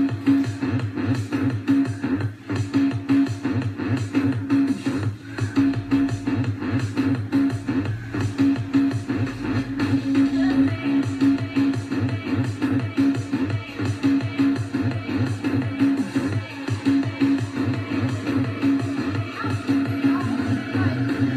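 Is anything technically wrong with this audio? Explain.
No, there's nothing technically wrong here that I can hear; it all comes through just as it should.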